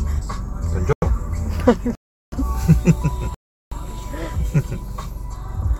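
At 0.93 s the sound drops into a block of digital silence for about 93 ms, then at 1.95 s and again at 3.34 s into longer blocks of about 372 ms each. Lengths like these fit buffers of 4096 and 16384 samples left as zeros when the output wasn't filled in time. A gap that fades or gets patched with smeared sound would have soft edges. These cut to silence and back instantly.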